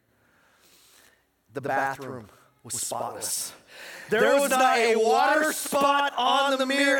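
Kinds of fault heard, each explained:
Channel delay (doubling): one channel lags by 85.3 ms, fitting a 4096-sample buffer, so the mono sum carries an equally loud slap echo behind every sound.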